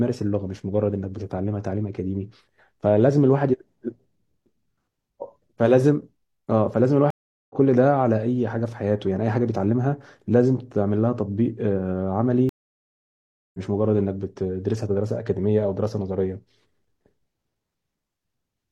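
At 7.10–7.55 s and 12.49–13.59 s, stream reconnects cut the speech to silence for about 0.40 s and 1.05 s. The connection dropped, and a fresh decoder resumed mid-stream roughly 0.4 s and 0.7 s later, skipping material. Both show as blank full-band gaps in the spectrogram and flat waveform stretches.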